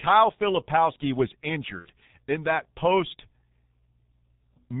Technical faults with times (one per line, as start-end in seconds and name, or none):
0.00-4.80 G.723.1 codec
1.79-1.89 VoIP packet loss concealed by the speech codec